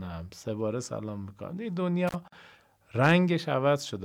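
At 2.08 s the speech drops out for about 47 ms, through 2.15 s, with crackle at each edge. This is an intermittent contact: a loose cable or plug briefly lost connection, so the signal path opened and only faint hiss got through until the contact closed again. On a waveform the trace collapses almost to flat between two sharp, ragged spikes. A spectrogram shows thin vertical broadband streaks at the edges enclosing a nearly empty band.

From 2.28 s to 2.32 s a silence of about 45 ms cuts into continuous speech, which then resumes exactly where it stopped. This is a gap at a join of encoded pieces. Separately encoded sections were spliced without trimming the encoder's start-up delay and end padding, leaving dead air at the seam. The spacing points to pieces about 4 s long. The waveform shows a clean hole, and the spectrogram shows a full-height blank column with slightly blurred edges from the codec.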